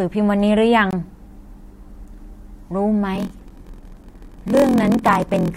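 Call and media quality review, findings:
Hard-edged dropout, about 21 ms of silence, 0.91 to 0.93 s. Gap between stream segments: segment timestamps, roughly 2.0 s segments, leave a hole that the player fills with silence. Audio is delayed, not lost. Check segmenter/packager timestamp alignment.

Buzz at 43.1 Hz under the speech, 3.13 s to end, delivery slowed to 0.938x at near-normal pitch. Block size mismatch (padded): the upstream stage writes short blocks, and the remainder of each read is zero-filled. This fits a 1024-sample read size. Check the buffer handoff between stages.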